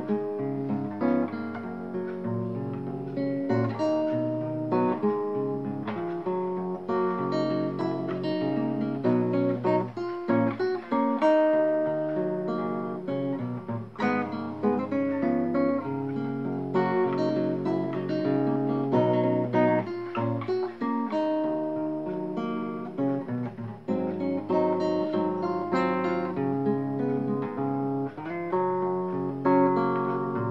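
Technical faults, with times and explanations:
No technical faults were found anywhere in the clip.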